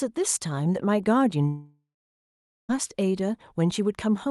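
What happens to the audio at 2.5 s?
From 1.47 to 2.71 s the sound trails off as a fading buzz, then goes silent, likely a long network dropout. Unlike brief packet loss, the lost stretch never returns.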